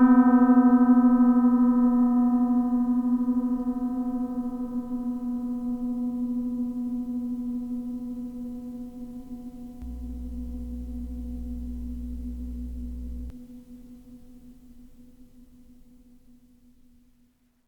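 From 9.82 s to 13.30 s a mains hum sits under the sound: a steady, low 60 Hz drone, fairly strong and only about 10 dB below the material itself. Power-line current has leaked into the signal path, as from a ground loop or nearby transformer, adding its tone and a few low harmonics. On a spectrogram this shows as a flat horizontal line at 60 Hz with fainter lines above it, starting and stopping abruptly at those times.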